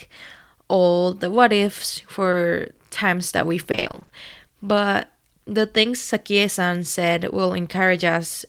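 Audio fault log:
2.31–2.35 s, short concealed packet loss: around 20 ms of speech failed to arrive in time, and the decoder bridged the hole by extending the preceding sound before fading back into the real signal, leaving a brief smear or wobble.
3.71–4.11 s, repeated packet loss (robotic sound): dropouts recur across this 0.4 s stretch, which fits about ten lost packets of up to 20 ms each. Roughly half the span is patched by extending earlier audio, so the speech turns choppy with pieces missing.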